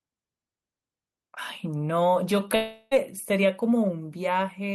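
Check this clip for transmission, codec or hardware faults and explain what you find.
One fault is audible in this speech: a long network dropout from 2.55 to 2.94 s. For about 0.36 s the last sound stretches into a fading buzz, likely from lost packets concealed by repeating audio. A spectrogram shows frozen flat bands; the waveform decays before speech resumes, with that stretch missing.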